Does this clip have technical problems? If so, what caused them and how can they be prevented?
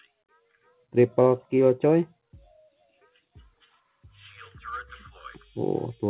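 No, no technical faults.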